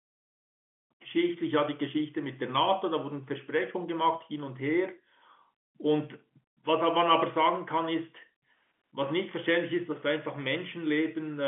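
Nothing stood out on listening to this speech, which carries the narrow, band-limited sound of an ordinary telephone line.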